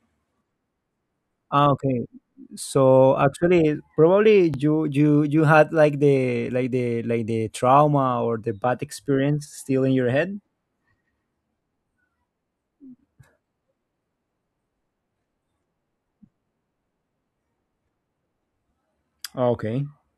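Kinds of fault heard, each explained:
Overlapping chunks: speech processed in 6-second blocks, each starting 25 ms before the last ended, so that slice replays as a stutter at 4.54 s and 10.56 s.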